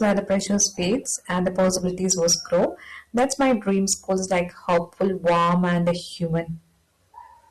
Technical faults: hard clipping; adaptive stream starting at a low bitrate

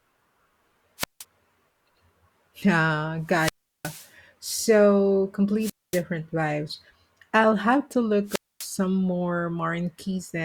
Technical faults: wireless microphone squelch dropout

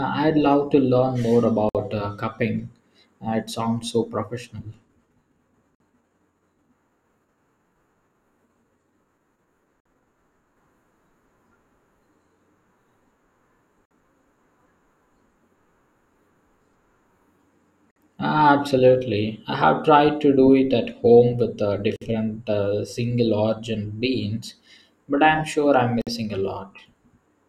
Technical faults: gap at a join of encoded pieces

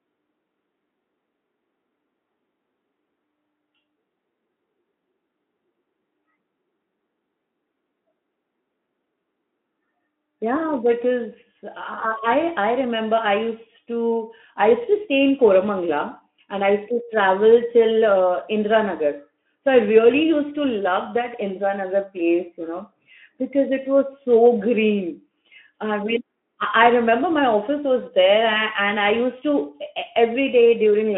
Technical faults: none

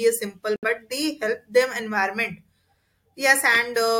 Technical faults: corrupt frame muted

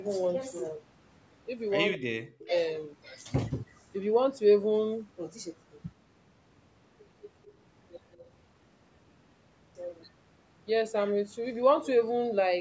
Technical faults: echo leak; speech suppressed in double talk

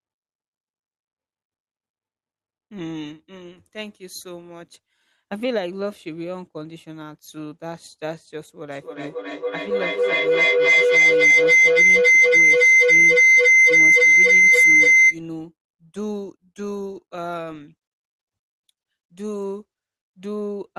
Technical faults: feedback howl

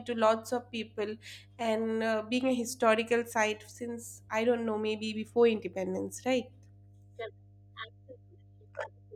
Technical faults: mains hum

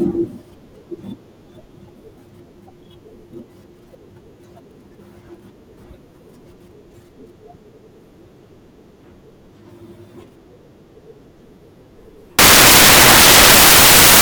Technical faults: samples built from the wrong bytes

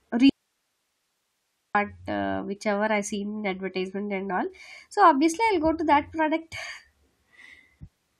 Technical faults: audio dropout to a faint residue

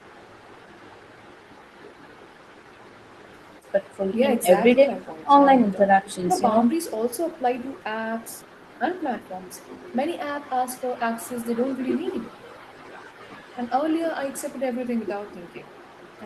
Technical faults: none

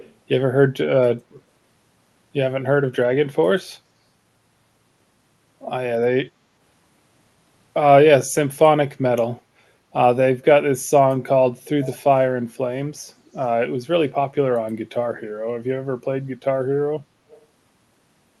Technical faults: echo leak

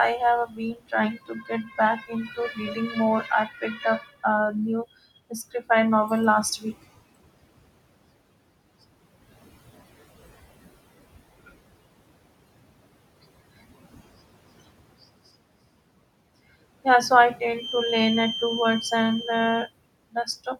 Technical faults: noise suppressor artifacts; speech cut by the noise suppressor

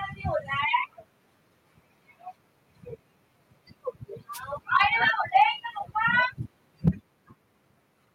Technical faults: wireless microphone noise hit; microphone overload; microphone volume stepped down

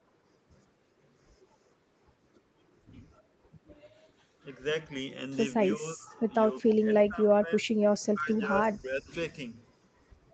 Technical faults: speech suppressed in double talk; echo leak

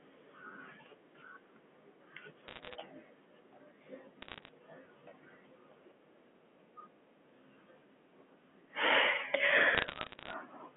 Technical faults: repeated buffer; bit errors on a digital phone line

